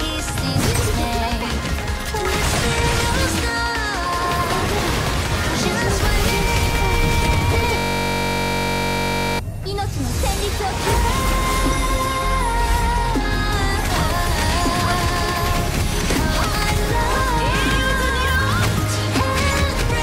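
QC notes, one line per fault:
7.78–9.39 s, system hang loop: for about 1.6 s the audio collapses into one 21.33 ms fragment repeated back to back, roughly 76 times, which fits a 1024-sample buffer. The playback side stalled while the sound hardware kept cycling through the same ring buffer. Because the loop is so short, it repeats at 46.9 Hz and fuses into a steady, pitched buzz rather than a stutter.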